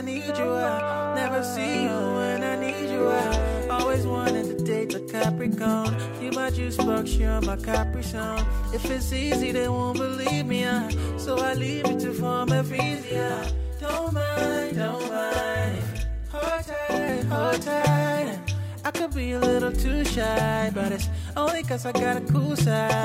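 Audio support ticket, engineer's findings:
Doubled, slapback sound from 12.96 s to 17.09 s: channel delay (doubling). One channel arrives about 43 ms late, which fits a 2048-sample buffer in that channel's path. The equal-level copies summed to mono, producing an audible second hit.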